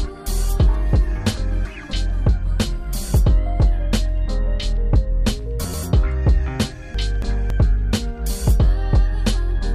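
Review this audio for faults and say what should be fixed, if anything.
Frames out of order occur at 1.37 to 1.93 s, 5.64 to 5.83 s and 6.95 to 7.50 s. In each stretch two neighbouring blocks swap places, about 279 ms each in the first and last and 93 ms in the middle, which fits runs of three frames and then a single frame. The sound garbles into a flutter. Unlike a dropout, nothing goes missing and the timing never shifts.

Prevent it by reordering frames by sequence number in the jitter buffer before decoding.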